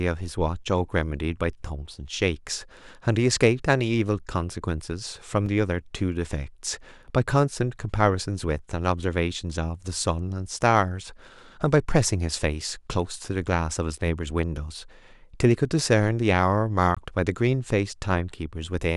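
At 5.46 s the speech drops into a block of digital silence about 5 ms long, and at 16.95 s a second block of about 20 ms follows. Both are gaps where the sound cuts out abruptly and returns with no fade, as happens when an output buffer is not filled in time. The first gap is short enough to sound like a tick rather than silence.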